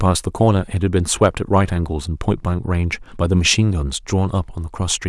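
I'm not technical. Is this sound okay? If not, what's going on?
No. From 1.22 to 1.58 s the speech has hard clipping: the loudest moments were slightly too big for the recording to hold, so their tops got sliced flat. You hear a brief crackle only on the peaks, unlike steady background hiss.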